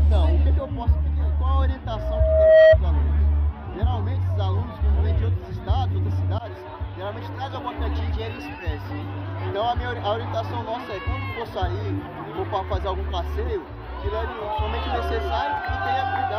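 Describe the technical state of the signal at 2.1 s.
At 2.1 s a loudspeaker feedback squeal is building, spanning 1.94 to 2.78 s. Microphone and speaker form a loop whose gain exceeds one at 637 Hz, so that tone swells over most of a second into a piercing squeal about 15 dB above the sound.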